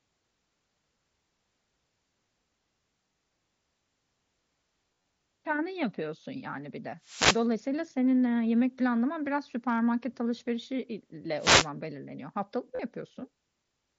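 Between 4.96 and 5.04 s, concealed Bluetooth headset packet loss occurs. Voice packets from the headset failed to arrive, and the phone filled each gap by repeating the closest-matching recent stretch of waveform. About 82.5 ms went missing across a 105 ms span, which fits roughly eleven 7.5 ms frames. The longest unbroken run is 30 ms, enough to leave a brief buzzy, sustained tone at full level with a slight warble as the real speech resumes.

At 7.01 to 7.47 s, just after "yapıyorsun yani bir de", a wireless microphone noise hit occurs. The analogue FM radio link faded as reflected signals cancelled, so receiver noise surged over the speech as a swish of static lasting nearly half a second. A second hit of the same kind follows from 11.38 to 11.69 s, a shorter burst of hiss.

From 12.75 to 12.80 s, another concealed packet loss fills about 37.5 ms with repeated waveform. It is briefer than the first, and loud sounds in the speech carry the light grain of the mSBC wideband headset codec.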